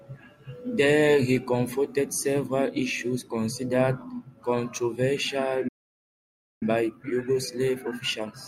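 At 5.68 s the speech cuts out in mid-flow and stays silent for about 0.93 s, resuming at 6.63 s. This playback stall most likely comes from the player running dry of buffered data, or its output thread being briefly blocked, so nothing reached the output.

From 6.63 s to the end the speech sounds hurried, running about 1.15 times normal speed while keeping its pitch. This is time-compressed catch-up: the player trims small slices from its backlog and cross-fades the joins to regain lost time.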